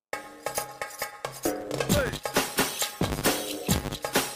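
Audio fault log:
Throughout: filter restarted on every block. You get a steady 100 Hz buzz riding on the sound, rising and falling with its level. The filter drops its state every 10 ms block and starts from silence, so each block opens with a little transient tick.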